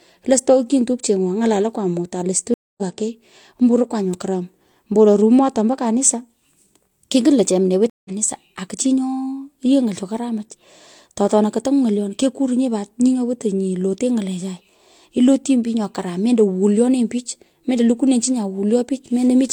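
Stream reconnects at 2.54–2.83 s and 7.90–8.10 s: the connection dropped and a fresh decoder restarted, leaving gaps of 0.24 s and 0.16 s, with the speech resuming about a fifth and about 0.15 of a second further on.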